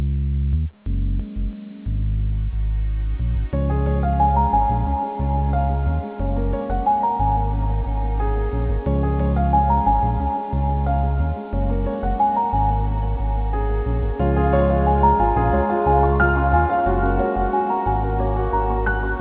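No technical faults can be heard anywhere in the clip. The audio comes over a WebRTC call path, with nothing above 4 kHz and the grainy coding noise of a narrowband codec such as G.711 A-law.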